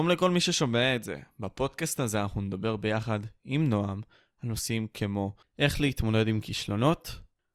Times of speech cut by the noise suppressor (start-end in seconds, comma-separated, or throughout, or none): none